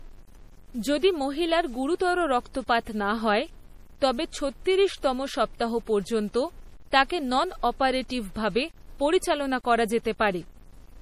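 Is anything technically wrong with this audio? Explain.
Yes, two faults run through the whole speech clip.

Across the clip, quiet passages and decaying sounds turn grainy and rough, with a distortion that moves with the signal and sits roughly 30 dB below it. This is likely low bit depth without dither: samples were truncated to a coarse grid, consistent with 8 bits, so the rounding error tracks the sound.

Throughout, nothing is present above 15.1 kHz, and there is a smeared, swirly coding texture. This is low-bitrate audio saved at a high bitrate, likely an MP3 near 40 kbit/s re-encoded at 320 kbit/s, so the first encoding's losses and cut-off remain.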